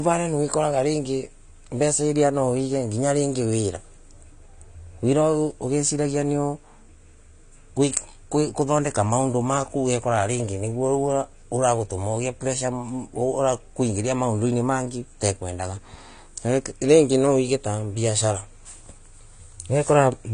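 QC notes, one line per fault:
Throughout, AAC compression: the speech sounds dull and smeared, with nothing above 10 kHz and a plainly audible fizzy, warbly edge on sibilants. That's likely a low-bitrate AAC-LC encode, which fits about 32 kbps, where the encoder drops the top band and thins out the spectrum.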